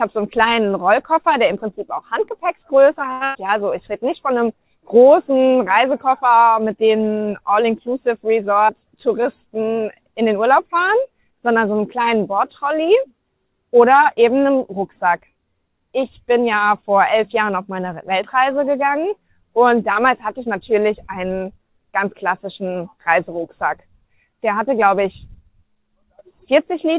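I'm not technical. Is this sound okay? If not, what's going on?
No. There are five separate glitches, the kind a live internet call produces when audio packets arrive unevenly.

At 3.12 to 3.23 s there is a short stall from a late packet. One chunk of audio showed up late, so the receiver held the last sound for about 85 ms while it waited, then carried on from the same spot. Nothing is lost; one sound is simply stretched.

Right after, from 3.25 to 3.37 s, comes a burst of packet loss. About 100 ms of audio never arrived in time. The receiver filled the hole by holding and fading the last sound, then resumed later on, so that tenth of a second is gone.

At 8.68 s there is a skip ahead. The receiver had a backlog, so it dropped roughly 70 ms of audio and jumped forward to catch up. The two sides are joined almost directly, so it sounds like a small hiccup with a piece missing.

From 8.97 to 9.55 s there is a jitter buffer slow-down. 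The receiver was running short of stored audio and built up a reserve by repeating tiny slices many times. That stretch plays at about 91% speed, roughly 59 ms longer, with the pitch unchanged, so sounds feel drawn out.

From 23.77 to 24.55 s there is the opposite, a jitter buffer speed-up. Too much audio had piled up, so the receiver trimmed tiny slices repeatedly, roughly 50 ms in total. That stretch runs at about 106% speed at the same pitch and sounds slightly hurried.

Throughout, the audio also has the muffled, phone-like quality of a standard call codec, with nothing above 4 kHz. That part is expected for this kind of call and is not a fault.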